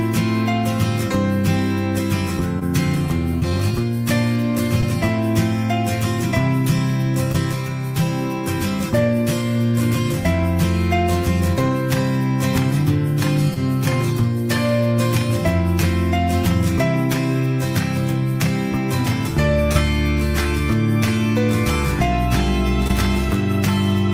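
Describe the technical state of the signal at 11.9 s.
The signal at 11.9 s is intact, with no audible fault at that point.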